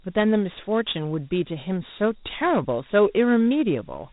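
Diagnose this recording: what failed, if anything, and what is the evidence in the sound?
The codec stage failed: the speech was stored as Dialogic VOX ADPCM, coarse 4-bit adaptive coding that fits about 32 kbps at 8 kHz sampling. Throughout, nothing sounds above 3.8 kHz, and a plainly audible gritty hiss rides on the speech, tracking its level.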